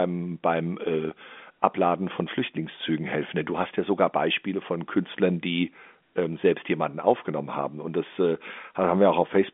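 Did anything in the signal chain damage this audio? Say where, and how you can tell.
No: the only stage that leaves a mark is the G.711 A-law telephone path at 64 kbps, and its 200 Hz to 3.5 kHz line band with nothing above 3.7 kHz is that format behaving as designed, not damage.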